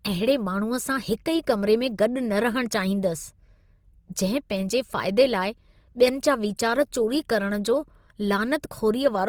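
All the way through, the speech has a grainy, plainly rough texture, likely Opus compression, fitting a rate around 24 kbps, with noise-filled bands standing in for lost detail up to about 20.3 kHz.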